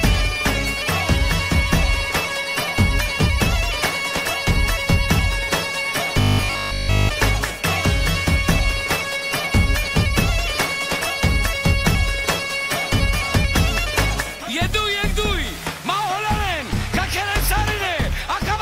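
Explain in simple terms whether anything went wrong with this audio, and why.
Robotic sound from repeated short buffers appears from 6.21 to 7.09 s. For that stretch the audio becomes a stiff, metallic buzz locked at a steady 50 Hz, as if it were repeated rather than flowing. The likely cause is new audio arriving too slowly, so the playback kept replaying the same 20 ms snippet to fill the gap while the real sound was skipped. That 20 ms loop repeating fifty times a second is what creates the fixed buzzing pitch.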